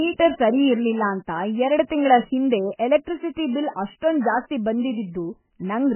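A speech recording runs its whole length with a hard ceiling at 3 kHz and a watery, swirling texture as faint detail flickers in and out, the signature of heavy MP3 compression, likely at a bitrate near 10 kbps. Unlike plain low-pass filtering, the band-limiting here comes with that unstable, chirpy shimmer. From 3.71 to 3.76 s, pre-echo puts a 50 ms smear of hiss just ahead of a sharp onset, because the codec's block-wide noise leaks backward before the attack. Unlike a genuine echo or reverb, it arrives before the sound rather than after it.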